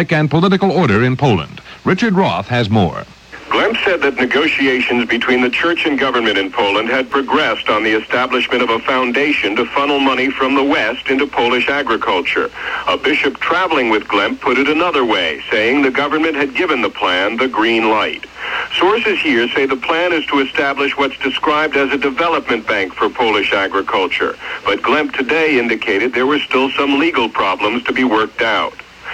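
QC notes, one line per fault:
7.12 s, underrun with held sample: the output buffer ran dry for about 1.45 ms, a gap of 64 samples, and the converter froze on its last value, so the waveform sits flat. That frozen level separates it from a dropout to zero: the sound doesn't snap off with a click. Around a millisecond and a half of live audio was lost.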